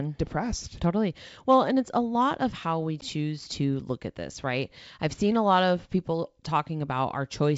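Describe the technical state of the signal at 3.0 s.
A hard-edged gap from 3.01 to 3.05 s, after "lot of how we", leaves speech returning with brief distortion: packet loss on an ADPCM call. About 10 ms, probably one packet, dropped out, throwing the decoder's predictor and step size out of step before "to look at this".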